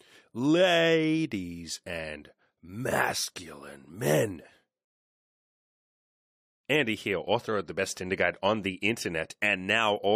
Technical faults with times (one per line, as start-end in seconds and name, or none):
5.21-6.33 rebuffering stall